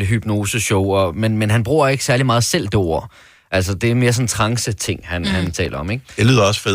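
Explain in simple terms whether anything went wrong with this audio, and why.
Something did go wrong near the end. From about 5.47 to 5.75 s, the computer handling this speech couldn't keep up. Audio is processed in tiny slices, each just under a thousandth of a second, and several of those slices weren't ready on time. Each late slice came out as a tiny hole of silence with sharp edges. Strung together, those holes make a short burst of processor overload crackle, a gritty tearing over the voice that stops once the computer catches up.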